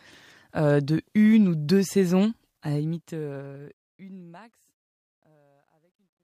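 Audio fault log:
2.50–6.23 s truncation distortion on a fade: the fade-out steps coarsely, which fits a 12-bit stage without dither, turning gritty from 4.92 s rather than thinning smoothly.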